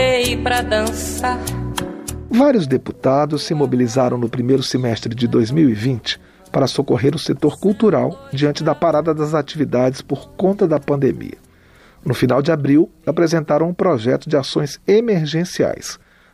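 The signal holds steady throughout, with no audible technical faults at any point.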